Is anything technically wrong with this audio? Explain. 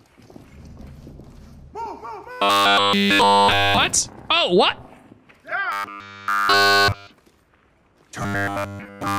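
Yes, there's robotic sound from repeated short buffers in three stretches: 2.31 to 3.78 s, 5.72 to 7.07 s, and 8.22 s to the end. Each time the sound turns into a stiff, metallic buzz at 100 Hz that only loosely tracks the material underneath. That pitch points to a 10 ms chunk looping over and over. The likely cause is new audio not arriving in time, so the last chunk gets replayed while nearly all the real audio in between is lost.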